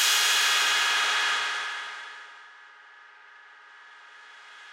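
Nothing here calls for attention; it's just everyday sound going along as it should, with nothing technical getting in the way.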